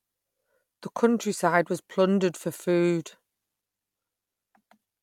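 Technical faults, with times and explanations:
No technical faults detected in this speech recording.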